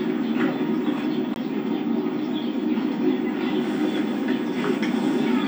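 At 1.34 s there is a very brief dropout of roughly twenty milliseconds, after which the audio resumes from a different point. This is a CD skip: the laser jumped onto another turn of the disc's spiral, and the player muted briefly before continuing.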